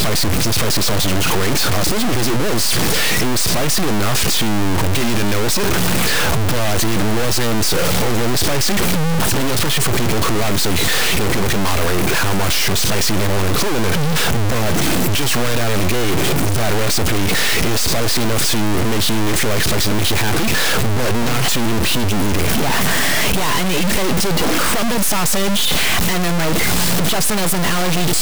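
Stuck bit, throughout: harsh, buzzy distortion over the speech and loud noise filling pauses, likely one high data bit held fixed, giving errors near -10 dBFS.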